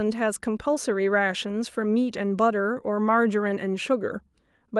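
No technical faults can be heard anywhere in the recording.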